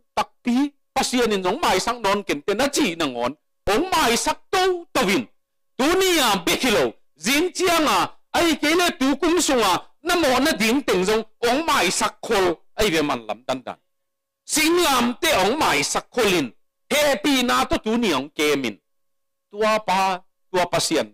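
At 3.67 s, 12.81 s and 17.73 s the zero line shifts abruptly, a DC step of about -15 dBFS, then about -13 dBFS at the last. Each offset drains away through a 20 Hz high-pass, leaving a brief low thump under unchanged sound.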